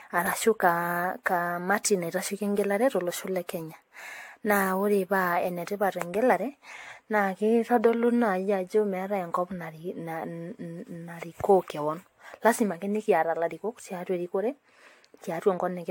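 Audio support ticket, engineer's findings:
Generation loss, throughout. Swirly, smeared, hollow speech with blurred attacks, nothing above 18.6 kHz. Likely repeated lossy re-encoding, around seven passes, consistent with AAC-LC near 96 kbit/s. Each pass requantises on a shifted frame grid, compounding noise and spectral holes.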